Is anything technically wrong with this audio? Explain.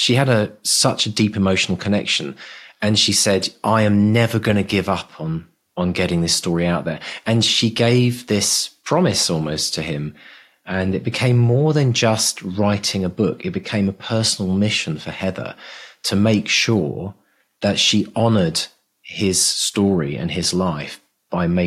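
No, nothing is technically wrong with this audio.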